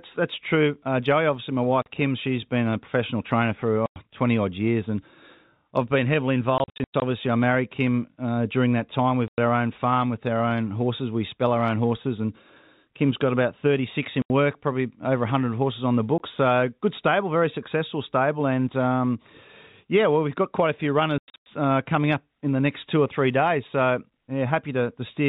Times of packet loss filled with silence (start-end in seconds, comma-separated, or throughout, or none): 1.82-1.86, 3.86-3.96, 6.58-7.02, 9.28-9.38, 14.22-14.30, 16.18, 21.18-21.46